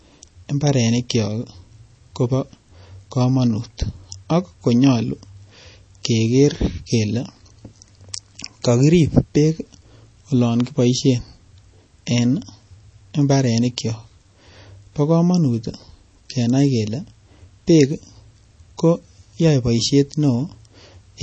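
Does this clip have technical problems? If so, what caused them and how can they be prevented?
Yes. Throughout the clip, MP3 compression at a low bitrate is the likely cause. Short of bits, at what sounds like about 32 kbps, the encoder removes everything above 8.4 kHz and drops weaker frequency lines from frame to frame. That leaves the speech dull, watery and swirly. Encoding at a higher bitrate, or keeping an uncompressed copy for delivery, would prevent it.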